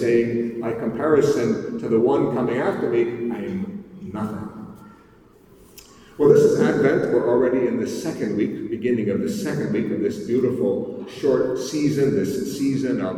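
No audible technical faults anywhere in the clip.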